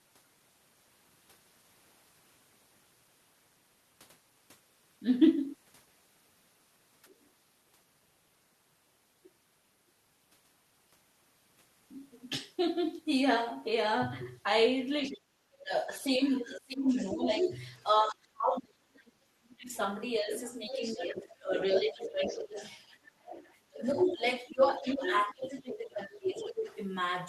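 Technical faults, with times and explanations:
7.14–7.29 s, other side's voice leaking through: a brief, very faint second voice, roughly 40 dB under the talker, likely loudspeaker echo the canceller left behind; it adds sound rather than removing any.
15.04–15.17 s, other side's voice leaking through: a short scrap of another voice about 20 dB below the talker, likely residual echo that slipped past the canceller.
15.11–22.57 s, speech suppressed in double talk: the main talker's own level keeps sinking, by as much as about 30 dB and for roughly four seconds in total, likely because the canceller turned everything down while both sides spoke.
16.28–17.83 s, other side's voice leaking through: the second voice rises almost to the talker's level, likely because the canceller missed this echo during the overlap.
20.34–25.6 s, other side's voice leaking through: a longer stretch of the far voice about 10 dB under the talker, likely uncancelled loudspeaker pickup.
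23.7–26.67 s, speech suppressed in double talk: the talker dips again, up to about 15 dB for around two seconds, likely the canceller ducking both voices while the other side talks.
26.16–26.75 s, other side's voice leaking through: a short burst of the other voice about 10 dB below the talker, likely leftover echo.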